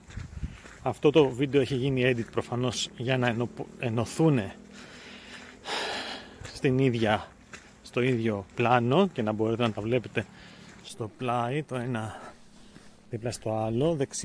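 No technical faults can be heard anywhere in the clip.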